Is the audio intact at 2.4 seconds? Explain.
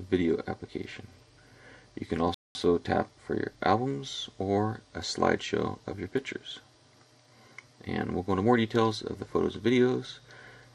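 No. A playback stall covers 2.34 to 2.55 s: the player likely ran out of data or had its thread blocked, so output halted. The sound cuts off mid-flow and falls silent for about 0.21 s before resuming.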